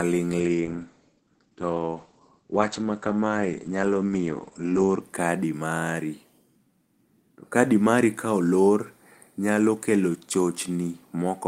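From 0.41 to 5.07 s, a call bitrate drop hits: roughly 32 to 10 kbps. Bandwidth shrinks from 20 kHz to 8 kHz. Speech turns rough and muffled.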